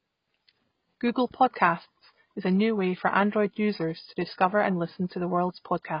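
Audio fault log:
Throughout: AAC compression. The speech was likely encoded with AAC-LC at a very low bitrate, consistent with about 16 kbps. The encoder discards everything above 5.1 kHz and starves the remaining bands of bits, so the sound is dull, smeared and heavily damaged.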